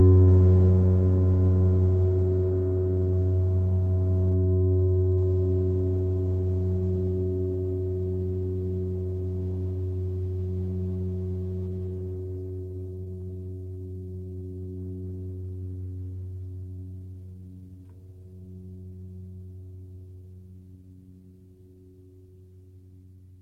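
Repeated stalls (stutter) run from 10.65 to 13.86 s in this music clip: dozens of brief halts, none longer than about 21 ms, where packets arrived too late or too slowly and the emptied jitter buffer stretched the last sound instead of playing new material. The fills total 0.66 s, about a fifth of that stretch, and nothing is lost, but the music drags and stutters. A jitter buffer slow-down follows from 13.16 to 15.02 s, overlapping the end of the stalls. To rebuild its reserve, the receiver repeated tiny pitch-period slices over and over, adding 292 ms and playing the passage at 85% speed with unchanged pitch, so sounds are drawn out. A jitter buffer speed-up from 16.77 to 19.05 s does the reverse. With surplus audio queued, the receiver cut short pitch-period pieces repeatedly, trimming roughly 0.4 s and running at 115% speed at the same pitch, so the music sounds hurried and loses its steady tempo.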